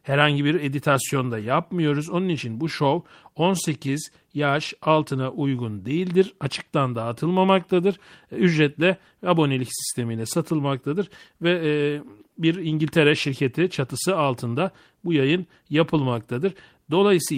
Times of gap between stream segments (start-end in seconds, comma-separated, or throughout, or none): none